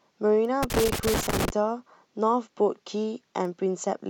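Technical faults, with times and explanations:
0.45 s and 3.45 s, bit error spike: each is a single sharp tick, one sample long, peaking at about -25 dBFS. A flipped bit in one sample throws its value off by a power of two, and the next sample is correct again, so the click is broadband, instantaneous and has nothing to do with the speech around it. Unlike connector crackle, it is one isolated tick with no cluster and no scratchy texture, and the two ticks sound the same.
0.63 to 1.5 s, loose connector crackle: an irregular burst of crackling and scratching lasting nearly 0.9 s, with the speech chopped as it runs through it. A worn or dirty contact rapidly makes and breaks the circuit, interrupting the signal in uneven fragments, and any DC on the line turns each break into a pop. What separates it from bit errors is its duration and ragged, uneven texture: many overlapping crackles rather than one clean tick.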